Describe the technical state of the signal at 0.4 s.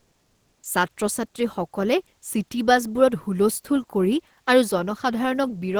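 At 0.4 s the background is comfort noise in place of the real room sound. It runs from the start to 0.63 s. The texture is steady and featureless, with no detail, at about 1 dB from the true background, which sits about 49 dB below the loudest parts. The likely cause is discontinuous transmission, as in Opus DTX. The sender went quiet during the pause, and the receiver filled it with synthetic noise until sound resumed.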